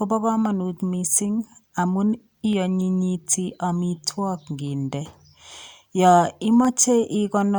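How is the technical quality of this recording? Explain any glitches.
Three sharp clicks break the speech, at 2.53 s just after "kamanut mising amun", at 5.58 s after "amitwog nginde", and at 6.65 s. Each is likely from dropped samples. A fraction of a millisecond goes missing, so the waveform jumps abruptly. Unlike a dropout, no audible gap or silence follows, only a thin broadband tick.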